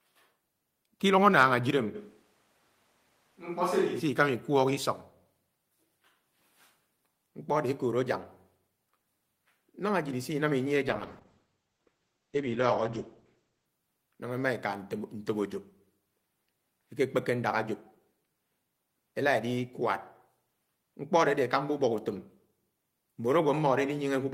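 From 1.96 to 3.99 s the speech turns suddenly roomy and hollow. Bass thins, and the level falls by roughly 5 dB. Room noise rises to around 40 dB below the speech. This is likely a switch to a distant microphone after the close one dropped out.

From 10.88 to 13.73 s comes a call bitrate drop. The encoder was starved of bits and coded the speech coarsely. It sounds rough and muffled, fitting a fall from about 32 to 10 kbps. Highs are cut above 8 kHz instead of 20 kHz, bottoming out for about 2.8 s. Full quality returns before "nañgá emá eka".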